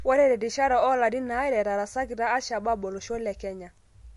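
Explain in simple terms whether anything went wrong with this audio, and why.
Something did go wrong: the speech has a watery, swirly quality that runs the whole way through, and nothing at all remains above about 11.3 kHz, so the top end sounds cut off and dull. That points to MP3 compression as the likely cause. When the encoder has too little data to work with, it drops the highest frequencies outright and lets quieter detail flicker in and out, which leaves hissing sounds thin and edges smeared.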